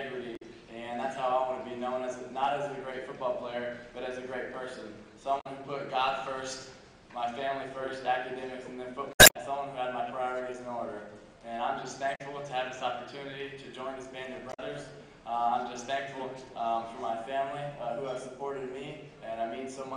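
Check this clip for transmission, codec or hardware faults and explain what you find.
Damaged data in a compressed stream occurs five times, at 0.35–0.42, 5.40–5.47, 9.11–9.37, 12.14–12.21 and 14.49–14.59 s. Corrupted frames make the decoder lose sync and search for a valid header, producing brief chirps, squawks, clicks or short holes. Spectrograms show short broadband smears, and waveforms show abrupt glitches.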